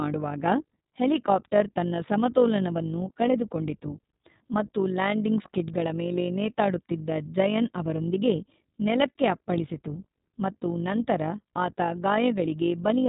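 Speech, coded with iLBC all the way through, and the damage is easy to hear: nothing gets past about 4 kHz, and the sound has that slightly rough, synthetic edge that fits 20 ms frames at around 15 kbps. There's also overlap-add ripple from start to finish. The frames were stitched back together with an overlap that doesn't sum to constant gain, so the level dips by about 6 dB roughly fifty times a second and you get a fast, robotic flutter.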